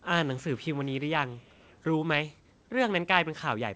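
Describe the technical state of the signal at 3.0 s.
At 3.0 s the speech is intact, with no fault, just the ordinary band-limited sound of a call path whose content stops at 8 kHz.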